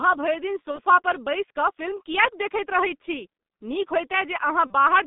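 The speech passed through a G.723.1 codec running at about 6.3 kbit/s. The codec models each 30 ms frame crudely and holds only a band from roughly 200 Hz to 3.7 kHz, so it damages the sound heavily throughout. High frequencies are gone and the low end is thinned, leaving a muffled, hoarse telephone quality with smeared consonants. Twice the speech shows VoIP packet loss concealed by the speech codec. The decoder filled each gap by extending its last pitch and filter while lowering the gain. After "भरि दिन", from 0.71 to 0.80 s, the sound turns into a brief, fading buzz or coloured noise. The same thing happens from 4.67 to 4.73 s. Each gap sounds like about 30 ms of lost audio, which fits a single missing frame. The recovery is visible in the longer damaged span, because each decoded frame builds on the one before it, so the voice stays weak or distorted a little past the actual loss.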